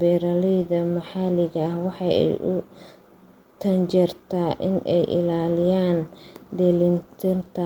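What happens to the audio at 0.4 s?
Nothing goes wrong at 0.4 s; the speech plays through that moment intact, with no dropout, click or distortion.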